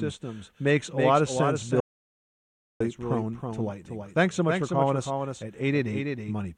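A doubled audio track runs through the whole clip: every syllable is followed by a second, full-band copy of the speech arriving about 300 ms later and around 5 dB quieter. The echo has no decay or room colour, so it sounds like a flat, out-of-step duplicate rather than a reflection. The likely cause is the same signal reaching the mix twice, once directly and once through a slower capture path, or an edit that left two offset copies stacked.

An audio dropout to silence runs from 1.80 s to 2.80 s. The speech breaks off mid-flow and resumes after one second of silence, with no room tone or background filling the gap, so whatever was spoken in that stretch is lost. This most likely happened because the input signal briefly disappeared, through a loose connection, a failed link or an accidental mute, while the recorder kept writing silence.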